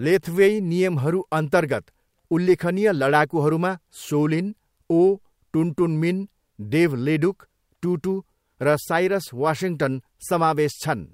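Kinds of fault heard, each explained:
Nothing in this speech recording stands out as a technical fault, so there's no kind of fault to list here.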